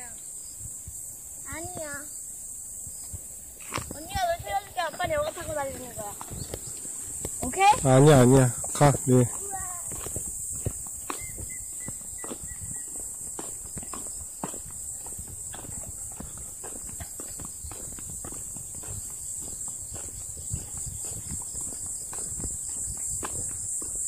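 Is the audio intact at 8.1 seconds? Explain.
No. Hard clipping runs from 7.62 to 8.45 s: peaks overdriven by about 11 dB are cut flat, adding high harmonics heard as harsh fuzz.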